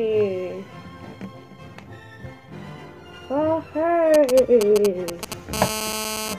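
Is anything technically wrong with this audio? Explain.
Yes, there is mobile phone interference in two places. From 4.14 to 5.34 s, GSM signalling bursts appear. A nearby 2G phone sends short groups of radio pulses at 217 Hz, and the audio circuit rectifies them. The result is a galloping tick-and-buzz pattern, roughly 5 dB below the signal.

From 5.53 to 6.34 s, a GSM phone buzz takes over. The phone now transmits continuously at a 217 Hz burst rate, as in a call. Rectified pulses give a steady, hard, raspy buzz, rich in harmonics, about 6 dB below the signal.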